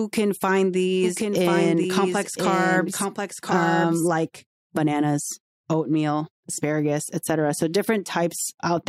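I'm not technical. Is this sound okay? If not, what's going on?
No. There's a doubled audio track from 1.04 to 4.08 s, just after "can find" and ending before "like bananas oatmeal asparagus". A second, somewhat quieter copy of the speech plays about a second late, switching on and off abruptly. It's likely from the recording being captured twice or an edit overlapping.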